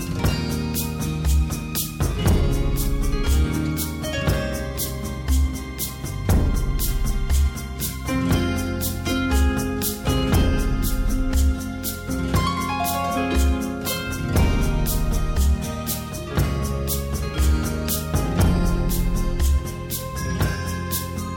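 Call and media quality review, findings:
No faults found in the audio path.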